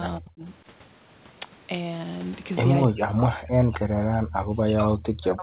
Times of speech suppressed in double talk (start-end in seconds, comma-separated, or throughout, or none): 0.19-0.48, 2.85-5.42